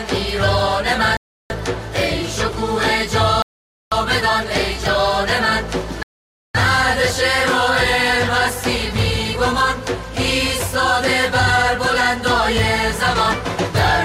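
The audio drops to complete silence three times, at 1.17–1.50 s, 3.42–3.92 s and 6.03–6.55 s, gaps of roughly a third to half a second, likely a Bluetooth stall where delayed packets emptied the headphones' buffer. Each shows as a flat waveform line and a blank vertical spectrogram band.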